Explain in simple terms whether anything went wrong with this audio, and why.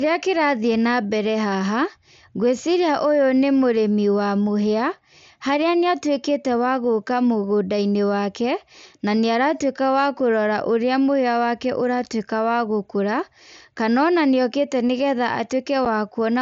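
Something did go wrong, briefly. At 15.85 s there is a tiny hole in the speech, about 7.5 milliseconds long, which fits a single lost packet on the wireless link between headset and phone. This is unconcealed Bluetooth headset packet loss: the missing piece was replaced by silence or an idle pattern rather than patched over, so the gap has sharp edges that can click. A concealed loss would sound smoothed or smeared instead. The wideband mSBC headset coding itself adds only a light graininess.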